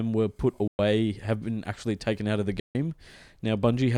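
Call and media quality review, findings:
Speech drops to silence at 0.68–0.79 s, right after "were put", about 112 ms gone, picks up at "have been actually taken". Likely Bluetooth dropout: packets not reaching the headphones in time, so playback skips ahead past them.

Second hole at 2.60–2.75 s, just after "taken out of the", about 149 ms missing. Same Bluetooth dropout pattern. Gap length fits roughly eight lost packets, versus about six the first time.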